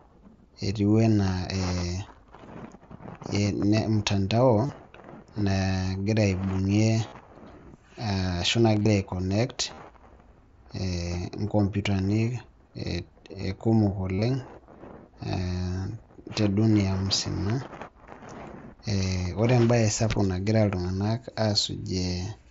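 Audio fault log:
4.66–4.69, 7.08–7.12, 8.73–8.86, 9.74–9.78 and 14.14–14.22 s, concealed Bluetooth headset packet loss: the headset link dropped about 30 to 45 ms at a time, patched by repeating the last stretch of waveform. That gives brief buzzy held tones and a small warble where real audio resumes, with the 8.73 and 14.14 s spots broken into scattered bits.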